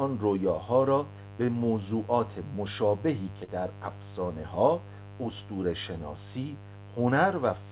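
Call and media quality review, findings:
Mains buzz, throughout. Steady raspy buzz, roughly 15 dB below the speech, built on 50 Hz harmonics. Probable component: dimmer, rectifier or unshielded cable near the capture chain, injecting switching spikes twice per mains cycle, so harmonics climb far above the fundamental. The sound stops at 4 kHz, consistent with narrowband G.711 mu-law at 64 kbps.

Short concealed packet loss, 1.46 to 1.50 s and 3.44 to 3.50 s. Brief smear in the speech, about 20 ms and 40 ms missing. Jitter buffer or network: audio arrived too late for the decoder, so the receiver extended the preceding sound, pitched if voiced and noise-shaped if not, then crossfaded back.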